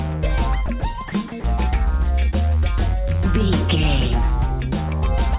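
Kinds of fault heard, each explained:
Sound dropped by the voice detector: Short stretches of sound give way to soft, steady noise at 0.66 s, 0.80 s, 1.08 to 1.12 s and 1.40 to 1.44 s. The sender's detector likely judged them background and stopped sending. Comfort noise fills each gap.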